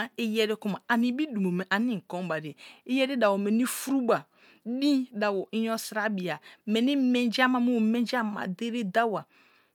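Nothing goes wrong anywhere in this speech recording; there's no technical fault to point to at any moment.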